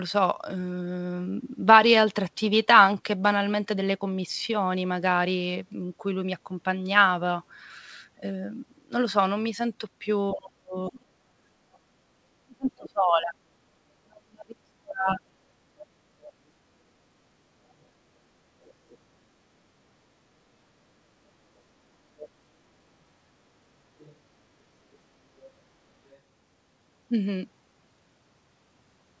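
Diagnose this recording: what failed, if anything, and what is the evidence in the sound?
The call processing stage failed, and the fault is speech suppressed in double talk. The near talker's speech sinks from 10.33 to 11.08 s and again from 12.44 to 15.22 s, dropping at worst by roughly 35 dB. The likely cause is the echo canceller's suppressor: with both ends active, it could not tell the local talker from loudspeaker echo and attenuated the whole microphone signal. In this band-limited audio, with nothing above 8 kHz (consistent with a G.722 call at 64 kbps), this shows as hard dips.

Also in call processing, the other side's voice leaks through. A second voice appears underneath at 10.33–11.79, 15.79–16.31, 18.63–18.98, 22.17–22.29, 23.98–24.16 and 25.39–26.19 s. It sits about 15 dB below the talker in the first stretch and fades to roughly 20 to 35 dB below in the later scraps. This residual echo likely comes from the canceller's adaptive filter not fully modelling the loudspeaker-to-microphone path, so part of the far-end playback reaches the send signal.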